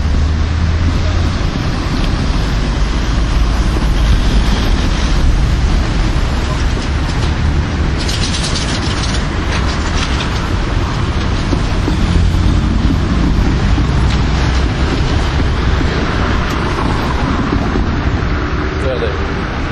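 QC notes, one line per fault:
11.70 s, DC step: the waveform's zero line suddenly jumps by about -19 dBFS and then drifts back as a 2 Hz high-pass bleeds the offset away. That abrupt shift lands as a low thump or click, while the sound riding on top carries on unchanged.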